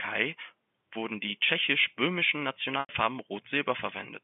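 Packet loss with pitch repetition at 2.80 to 2.89 s in this narrowband G.711 telephone speech: about 90 ms dropped, bridged by repeating the last pitch period, which fades out before the speech cross-fades back.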